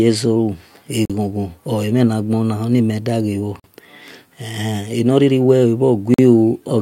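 Speech interrupted by a gap between chunks: hard-edged silences of 44 ms at 1.05, 3.60 and 6.14 s, spaced 2.5 s apart, where each chunk starts late or carries padding. Waveform and spectrogram show clean vertical blank strips at each join.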